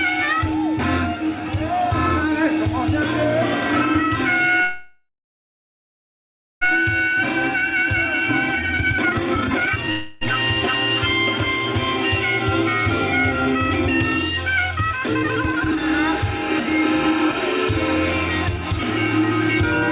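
Call audio freeze at 4.62 to 6.63 s and 9.91 to 10.23 s: the last sound is stretched into a fading buzz, the first settling into about 1.56 s of silence, before the audio resumes exactly where it left off, inserting roughly 2 s and 0.3 s of delay with nothing lost, likely from delayed packets emptying the jitter buffer. Jitter buffer speed-up at 8.55 to 9.88 s (193% speed, removing roughly 1.5 s), 14.93 to 17.47 s (136%, about 1 s) and 17.96 to 18.73 s (105%, a trace): the receiver trims repeated pitch-period slices to drain the excess buffered delay, so the sound rushes while the pitch stays unchanged. Throughout, the call path caps the band at 4 kHz, consistent with G.711 mu-law at 64 kbps.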